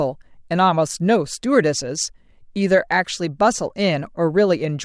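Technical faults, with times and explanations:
No technical faults can be heard in the speech. There is nothing here that needs a time or an explanation.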